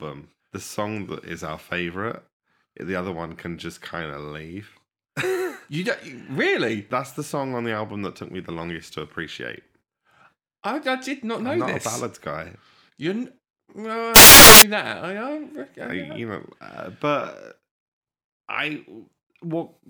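Samples built from the wrong bytes hit this speech clip from 14.16 to 14.62 s, a burst of about 0.46 s where the speech gives way to loud, harsh broadband noise. The reader here is assembling each sample from its bytes wrongly, whether shifted by one byte, in swapped order or with the wrong alignment, so the rapidly varying low-order bits end up as the dominant part of every value, and the signal's structure is replaced by dense broadband hiss.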